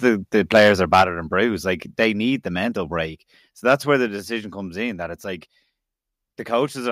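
Crackly, flattened peaks at 0.06–0.08 s and 0.51–1.03 s, just before "and bruised", point to microphone overload, likely the input gain driving the converter past its ceiling by up to about 8 dB. At 1.02 s the level drops by about 5 dB, likely the call software stepping the microphone volume down. More overload crackle follows at 2.01–2.04 s, then another step down of about 2 dB at 2.04 s. A small dip of about 1 dB comes at 3.06 s after "need the mental", more harsh clipping at 3.69–3.74 s, and a drop of about 4 dB at 4.08 s between "where the" and "decision comes in that".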